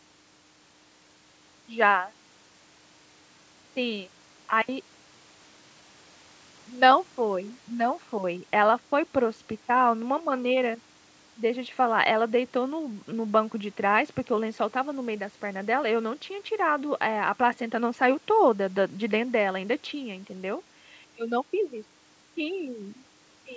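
No faults are present in the speech; it has passed through normal call microphone processing, so the lowest bass is filtered out and nothing reaches above 8 kHz.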